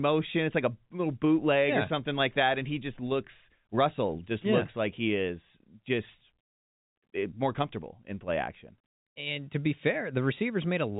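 No faults are present in the speech; it is carried in G.711 telephone coding, consistent with 64 kbps mu-law, with the band closing at about 3.8 kHz as that format dictates.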